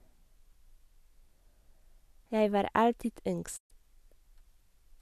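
At 3.56 s the receiver stops getting decodable data, a digital broadcast dropout in which frames either never arrive or fail their checksum, so the decoder mutes rather than play corrupt audio. The speech fades to silence over about 20 ms and stays silent until 3.72 s, leaving a hole of roughly 120 ms that points to a short run of about five lost frames. The speech resumes further along, so whatever was sent during the gap is gone.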